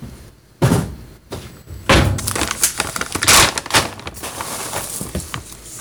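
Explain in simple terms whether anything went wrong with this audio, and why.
Nothing went wrong with this recording of sounds: the signal stays intact throughout, with no interruptions or disturbances to point to.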